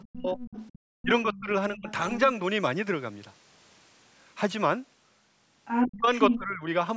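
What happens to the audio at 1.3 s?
Around 1.3 s the speech dips sharply, by roughly 20 dB at its deepest, in pieces adding up to about half a second within 1.02 to 2.13 s. This is speech suppressed in double talk, likely because the echo canceller could not separate the talker from loudspeaker echo while both sides spoke, and turned everything down.

At 1.34 to 1.4 s a brief scrap of a second voice sits faintly under the talker, well below its level. This is the other side's voice leaking through, likely loudspeaker playback picked up by the microphone that the echo canceller failed to remove completely.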